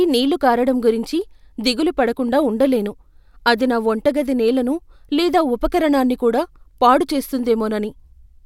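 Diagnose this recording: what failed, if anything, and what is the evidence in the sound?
Nothing in this speech recording points to a failure at any stage of the chain.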